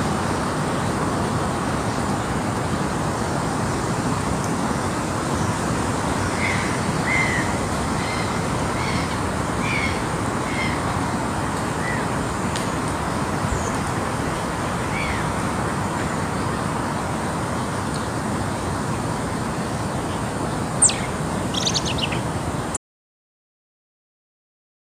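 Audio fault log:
22.77 s to end: audio dropout to silence, the sound cuts off abruptly into dead digital silence, likely a lost input link, shown as a flat waveform and blank spectrogram.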